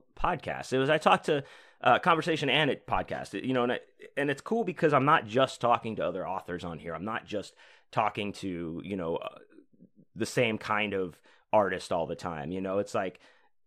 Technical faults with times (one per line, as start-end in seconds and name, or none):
none